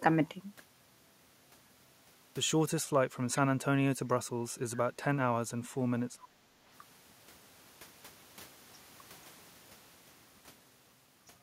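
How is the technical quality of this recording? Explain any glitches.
The recording has echo-canceller trouble in three forms, all between about 3 and 7 seconds.

From 3.35 to 3.4 s there is a brief echo leak: a faint copy of the speech returns 390 ms later, well below the main level. This is likely loudspeaker pickup that the far end's canceller missed. It sounds like a true delayed repeat, not a dip.

At 3.69 to 3.73 s and again at 4.46 to 4.53 s, the speech briefly dips by roughly 15 dB. This is likely speech suppressed in double talk, with the canceller ducking the talker while the other side was also speaking. The voice itself is turned down, so these are not echoes.

From 6.14 to 6.56 s the background is gated by the echo canceller. The room sound drops by about 12 dB for roughly 0.4 s while the loudspeaker plays, then returns. Unlike the double-talk dips, this affects the room sound rather than the speech.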